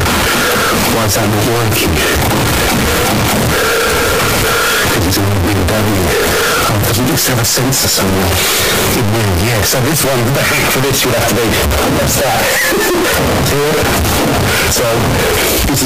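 From the very start and right through to the end, the whole thing is a wall of harsh, clipped noise: a float read as integer problem. The waveform sits as a near-square block at an almost fixed, high level, so quiet passages and background noise blast out as loud as everything else. The likely cause is 32-bit float samples being read as 32-bit integers, letting the sign and exponent bits dictate each sample's level.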